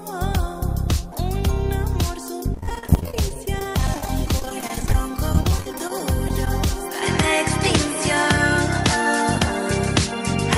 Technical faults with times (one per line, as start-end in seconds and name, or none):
2.54-6.47 repeated packet loss (robotic sound)
7.02-10.57 input switched to a poorer device